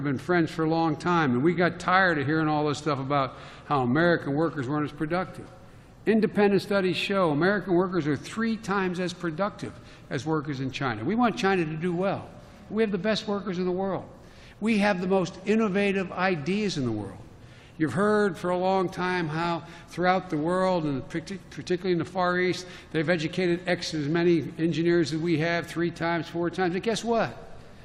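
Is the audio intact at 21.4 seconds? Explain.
Yes, the audio is intact at 21.4 seconds, with no dropout, click, distortion or other fault at that point.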